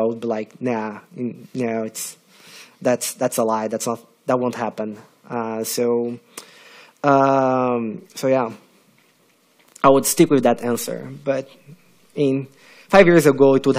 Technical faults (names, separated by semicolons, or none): none